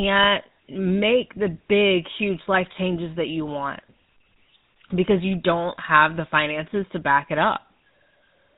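The speech has been passed through the GSM full-rate codec for its whole length, and the damage is plainly audible. The codec models the vocal tract and drives it with a regular pulse train that keeps only one in three excitation samples, at a data rate consistent with 13 kbit/s. The result is a buzzy, gravelly roughness on every stretch of speech, with nothing surviving above 4 kHz.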